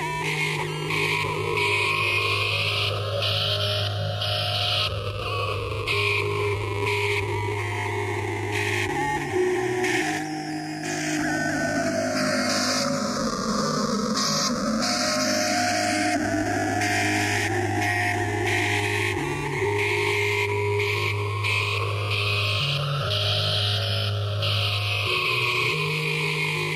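Gain pumping runs through the whole clip, with the gain swinging on the order of 5 dB. The likely cause is input gain set far too high, with a fast limiter or compressor clamping down on each peak and releasing in the pauses. Loud and quiet passages sit closer together than they should, and the result sounds squashed.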